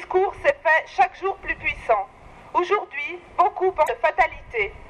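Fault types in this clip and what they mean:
Damaged data in a compressed stream: at 3.83 to 3.90 s a short burst of corrupted data in the encoded stream throws the decoder off. It can no longer parse the frames there, loses its place and hunts forward for the next valid frame header. The result is a brief glitch lasting about 70 ms.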